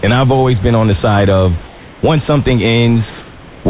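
Speech, carried through a call path that passes nothing above 4 kHz. The sender likely paused transmission in the gap after "on the side of", so from 1.67 to 2.03 s comfort noise replaces the background with a steady, featureless hiss about 3 dB quieter until "once something".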